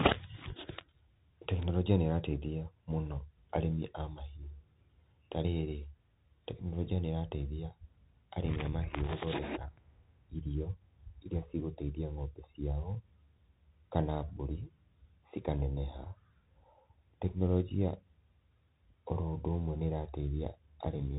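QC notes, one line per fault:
Throughout, Bluetooth CVSD headset codec: the speech is squeezed into a narrow band with nothing above about 3.8 kHz, so it sounds boxed-in and dull. The codec sends a single up-or-down bit per sample, at a rate that fits a 64 kbps stream, and adapts its step size as it goes. Loud, fast-rising sounds outrun the step and distort, s sounds come out scratchy, and a granular hiss sits beneath the speech; the codec damage is plainly audible.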